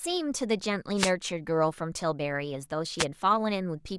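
A wireless microphone noise hit occurs twice, from 0.96 to 1.12 s and again from 2.98 to 3.05 s. The FM radio link from the microphone fades as reflected signals cancel the direct one, and the receiver's own noise rises into the gap. Over this speech each fade comes through as a brief swish or burst of static laid over the voice, the first lasting about 0.16 s and the second about 0.07 s.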